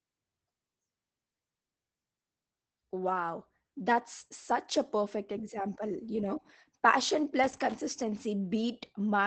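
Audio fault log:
Throughout, Opus voice compression: the speech is muffled and slightly hoarse, with a faintly robotic edge, and nothing reaches above about 8 kHz, so sibilants lose their crispness. The damage is plainly audible. This fits Opus in its SILK speech mode at around 12 kbps, coding a wideband signal in 20 ms frames. At that rate the linear-prediction coder can only describe the excitation coarsely, so the natural breathiness and detail of the voice turn rough and buzzy.
7.43 to 7.75 s, loose connector crackle: just after "know passion", an irregular burst of crackle and scratching lasts about a third of a second. A worn or dirty contact in the signal path is making and breaking rapidly as it shifts. It chops the audio into ragged fragments. The result is a rough, uneven scratching sound rather than a clean dropout.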